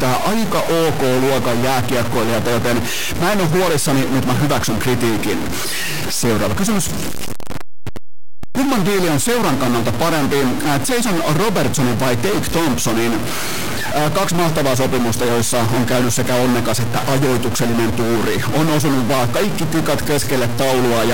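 A stuck bit runs through the whole speech clip, from start to finish. The speech carries a harsh, buzzy distortion, and the pauses between phrases fill with a rough noise rather than falling silent. This is most likely one data line held at a fixed value, so roughly half the samples land off by a step of around -15 dBFS. That fairly high weight makes the buzz strong, and the sign changes of quiet passages keep it loud.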